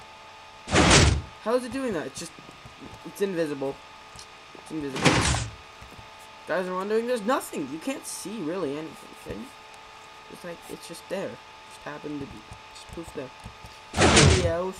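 No technical faults occur at any point in the audio, so there is nothing to describe in time order.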